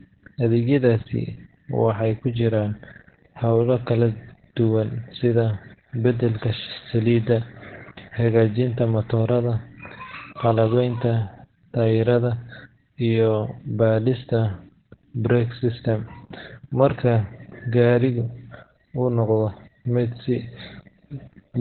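Speech carrying heavy Opus voice compression throughout: the sound is muffled, hoarse and slightly robotic, consistent with the SILK coder at a narrowband setting around 8 kbps. A spectrogram shows an empty band above 4.3 kHz across the whole clip.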